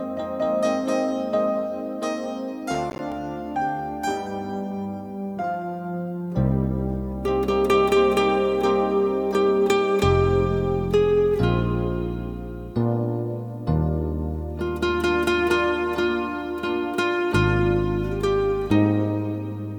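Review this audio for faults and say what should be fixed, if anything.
A burst of processor overload crackle runs from 2.75 to 3.12 s, a gritty tearing laid over the sound for about 0.37 s. The processor fell behind its buffer deadlines several times in a row, and each late block came out as a short hard-edged gap of silence. The spacing of the clicks suggests buffers of roughly 10 ms, with about seven of them missed. To prevent it, reduce processing load or use a larger buffer.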